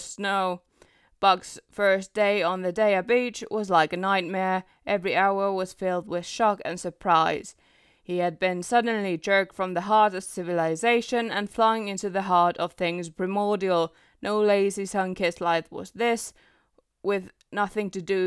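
No technical faults are audible.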